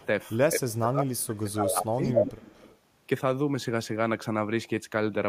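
At 0.00 to 0.06 s a faint echo leak is heard. A delayed copy of the speech, about 233 ms late and about 30 dB below it, comes back. The likely cause is a far-end loudspeaker whose echo canceller let some of the sound its microphone picked up return down the line.

From 0.53 to 2.02 s the speech is suppressed in double talk. The level dips repeatedly, at worst by roughly 25 dB, and parts of it thin out or drop away for about 1.5 s in total. Both sides were likely talking at once. The echo canceller then could not tell its own talker from the loudspeaker echo and pulled both down.

At 1.18 to 1.23 s another brief echo leak appears, 236 ms behind the speech and about 35 dB down. This is likely the same canceller missing a short scrap of returned sound.

From 2.02 to 2.78 s the echo leak is strongest. A copy delayed by 239 ms is about as loud as the speech itself, so the sound plainly doubles. 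The likely cause is the canceller failing to remove the loudspeaker pickup for that whole stretch.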